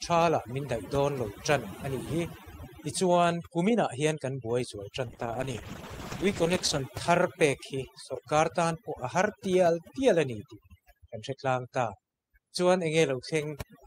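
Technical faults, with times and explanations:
Throughout, overdone noise removal: the background drops and breaks up into twinkling specks. A noise reducer set too hard is switching individual frequency bands down or off whenever they come close to its noise estimate, so quiet parts of the speech vanish along with the noise. Unlike a codec fault, this happens all the way through and doesn't change over time, and the specks are isolated bands that survived the gating.
5.06 to 6.91 s, call bitrate drop: for about 1.7 s the speech turns rough and muffled, then clears again. The call's bandwidth estimate fell, and the encoder was pushed from 48 kbps down to 11 kbps. At that rate Opus quantises more coarsely and cuts off the upper frequencies. The clear start and recovery set it apart from the constant noise-removal artefacts, as do the loss of treble and the coarse grain, where noise removal gives thinness and specks.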